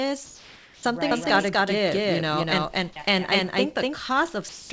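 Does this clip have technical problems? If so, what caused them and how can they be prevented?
Yes. Between 0.26 and 0.83 s and again from 4.49 to 4.70 s, the sender likely stopped transmitting during pauses, so comfort noise replaced the background: a flat, featureless hiss at almost the same level. Keeping discontinuous transmission off, or lowering its voice-detector threshold, preserves the real background.

From 1.11 to 3.95 s, the clip has a doubled audio track, likely because a second capture path mixed in a copy. It trails a fifth of a second behind at roughly equal loudness, starting and stopping abruptly. Routing the signal through a single capture path, or removing the duplicate in the mix, prevents this.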